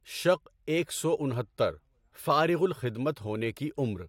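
Nothing stood out on listening to the speech in this recording.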